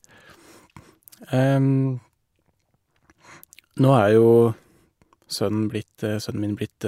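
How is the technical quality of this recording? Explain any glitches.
The technical quality of the recording is sound, with no glitches to explain.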